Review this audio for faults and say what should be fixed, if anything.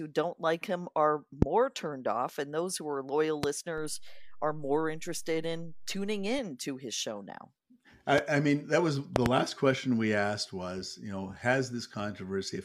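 Loud pops occur at 1.42 s, between "don't like him are" and "turned off and those", at 3.43 s after "those who are loyal", at 8.18 s just before "I mean that was", and as a double pop from 9.16 to 9.28 s. Each is a sharp spike roughly 20 to 25 dB above the speech, which continues underneath, likely caused by a voltage pulse from a plug, switch or static discharge reaching the input. Securing connectors and cables, and avoiding switching equipment while recording, would prevent these.

A DC step begins at 3.78 s, when the waveform's zero line jumps to an offset. It lasts until 6.39 s. Each jump is heard as a low thump, while the speech itself carries on unchanged. A high-pass filter or DC-blocking stage ahead of the converter, and not switching in offset-carrying inputs mid-recording, would prevent this.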